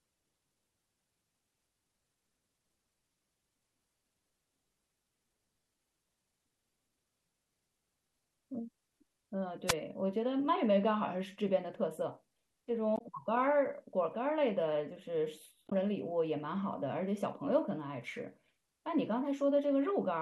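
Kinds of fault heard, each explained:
Wireless microphone noise hit: the analogue FM radio link fades as reflected signals cancel at the receiver, so receiver noise swells up and covers the speech. Here it is a brief swish of static lasting roughly 70 ms, from 9.67 to 9.74 s. On a spectrogram it shows as a short vertical smear of broadband noise filling the gaps between speech harmonics; the waveform shows a fuzzy, hash-like patch rather than a clean drop.
Damaged data in a compressed stream: corrupted bytes in the encoded file make the decoder misread frames, lose sync and hunt for the next valid frame header. This clip has two short blips, at 12.95 to 13.01 s and 15.66 to 15.73 s, each about 64 ms. A spectrogram shows blocky, smeared patches with abrupt edges and odd tonal streaks; the waveform shows a sudden discontinuity.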